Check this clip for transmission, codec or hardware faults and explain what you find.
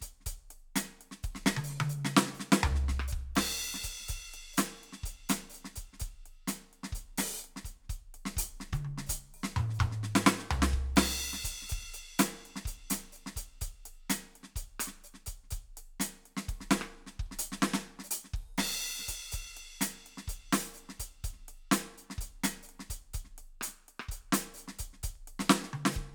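One fault appears near the end of the music. From 25.15 to 25.48 s there is processor overload crackle: the processor misses a handful of deadlines for very short buffers, under a millisecond each, leaving brief silent gaps with hard edges. The result is a gritty burst of crackle. On a waveform it shows as tiny flat-line dropouts, and on a spectrogram as thin vertical broadband streaks.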